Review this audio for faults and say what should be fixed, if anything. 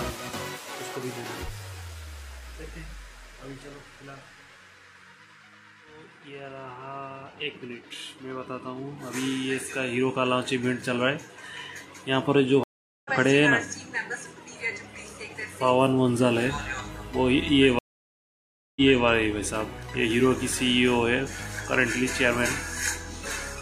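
Two stream reconnects occur: 12.64–13.11 s, with 0.42 s of silence before playback resumes roughly a fifth of a second later, skipping material; and 17.79–19.04 s, with 0.97 s of silence, resuming 0.28 s earlier so material repeats. Each time the connection dropped and a fresh decoder restarted mid-stream. Prevent it by buffering enough to ride out brief dropouts and resuming from the exact last received position.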